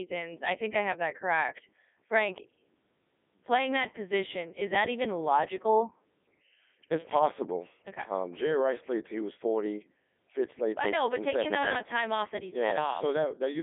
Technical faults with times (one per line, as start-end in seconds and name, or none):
0.00-13.63 Codec 2 vocoder